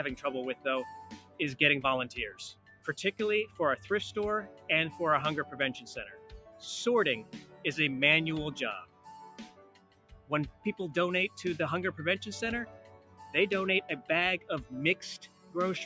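A noise suppressor meant for speech runs over the whole clip and treats sustained parts of the sound as noise, pulling them down by around 10 dB while onsets mostly pass. The result pumps and thins, with held sound and decays sagging after each attack. On a waveform the envelope dips repeatedly after transients. On a spectrogram, which tops out at 8 kHz from the call's microphone path, sustained bands fade and tails end early.

Six stretches of sound are cut by the noise suppressor. These fall at 0.55 to 1.4 s (down about 10 dB), 2.54 to 3.59 s (about 11 dB), 4.53 to 4.69 s (about 7 dB), 6.18 to 7.64 s (about 8 dB), 8.85 to 11.37 s (about 11 dB) and 12.66 to 15.55 s (about 10 dB). In each, steady or fading sound sinks while sudden sounds survive. The waveform shows notched troughs inside these spans, and the spectrogram shows dimmed, truncated energy between intact attacks.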